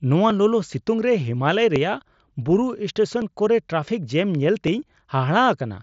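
From 0.30 s to 4.68 s, a brief click recurs in the speech every 1.46 s, about four times in all. This is likely clock drift buffer slips. The spacing points to two clocks some 700 ppm apart, with around 50 samples dropped or repeated at each slip.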